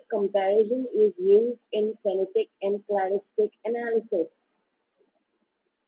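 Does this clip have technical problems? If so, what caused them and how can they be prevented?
No, no technical problems here.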